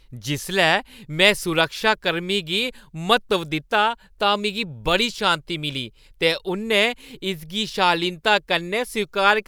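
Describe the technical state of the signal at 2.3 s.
At 2.3 s the signal is intact, with nothing audible that points to a technical fault at that moment.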